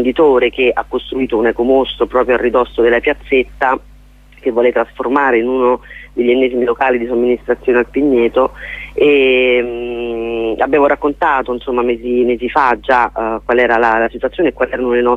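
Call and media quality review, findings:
No faults found in this clip. Nothing in the playback calls for a ticket entry.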